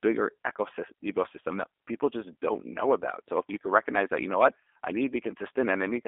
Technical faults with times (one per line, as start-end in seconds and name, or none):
0.00-6.07 G.729 codec